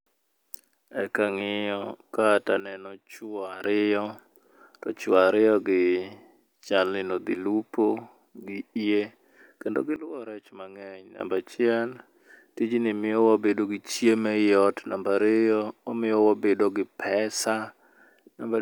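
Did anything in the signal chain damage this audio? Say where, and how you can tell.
Yes. The speech shows a sudden gain jump twice. From 2.6 to 3.64 s the level drops by about 11 dB, then returns. From 9.96 to 11.2 s, just after "gi yie kendo", it drops by about 14 dB. Speech and background noise fall and recover together, with abrupt edges and no fade. That points to the digital gain stage. The likely cause is a gain setting or bit shift applied instantly in the driver or call processing, with no ramp.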